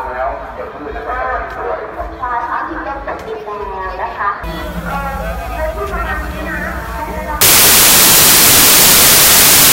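At 7.41 s the audio turns into loud, harsh broadband noise that runs to the end. These are samples built from the wrong bytes: each sample's bytes are misassembled, so the rapidly varying low-order bits land in the high-order position and dominate every value.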